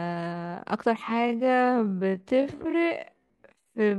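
From 1.0 s to the end, the speech drags to half pace at unchanged pitch, likely a time-stretched section padded by repeated short slices.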